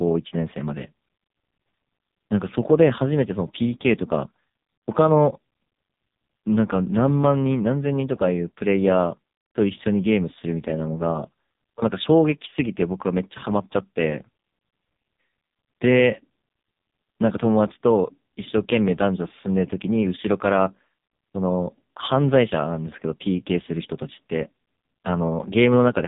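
Throughout, AMR narrowband mobile codec damage is heavy: buzzy, synthetic speech consistent with its lowest modes, around 5 kbps. The spectrogram shows nothing above 3.8 kHz.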